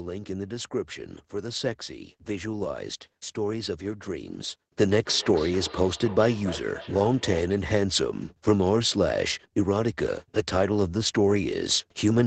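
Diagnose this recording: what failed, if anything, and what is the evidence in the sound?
Feedback echo between two devices, from 5.04 to 7.67 s: the speech returns roughly every 300 ms, thinner and more ringing each pass, peaking about 16 dB below the direct speech. A second device in the room replays the call, and that playback reaches this microphone, which the local echo canceller cannot remove.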